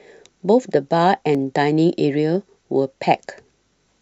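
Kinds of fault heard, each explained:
Dropped buffer (overrun): at 1.35 s the speech jumps slightly ahead, with no gap of silence. This is likely a buffer overwritten before the software read it, discarding roughly 15 ms of audio and splicing the surrounding sound together.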